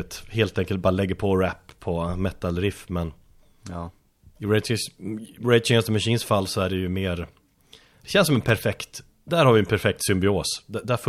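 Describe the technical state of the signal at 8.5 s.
At 8.5 s the speech is interrupted by loose connector crackle, running from 8.42 to 8.59 s, just after "det känns som en". A worn or dirty contact is making and breaking as it shifts, chopping the signal on and off and adding pops from any DC on the line. It sounds like a short, irregular scratching burst. On a waveform it shows as ragged dropouts and spikes; a spectrogram shows scattered broadband vertical streaks across those 0.18 s.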